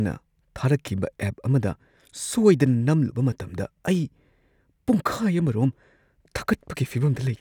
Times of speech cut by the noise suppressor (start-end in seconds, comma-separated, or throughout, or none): none